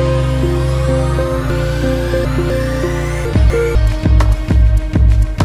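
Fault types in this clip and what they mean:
Chunks out of order: 250 ms blocks play after ones that should follow them, three places late from 1.5 to 2.5 s, one place late from 3.25 to 3.75 s. Unlike a dropout or repeat, nothing is missing or doubled; it jumbles.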